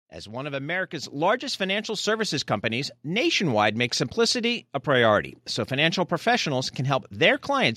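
A speech recording in which, at about 1.02 s, the whole signal jumps up in level at once: the microphone volume stepped up by about 6 dB. The call software judged the input too quiet and raised the device gain in a single step, so the voice and the background noise floor rise together. On a waveform the envelope widens abruptly at that point, and on a spectrogram every frequency band, including the quiet background between sounds, brightens at the same instant.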